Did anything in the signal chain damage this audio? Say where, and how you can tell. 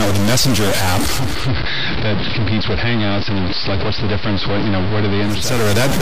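Yes. Distortion runs through the whole clip and noise fills even the quiet moments, likely a stuck bit at the converter or sample-format stage.

From 1.02 s to 5.68 s, hiss rises and the level drops about 2 dB: digital radio blending to analogue AM, with 0.47 s cross-fades.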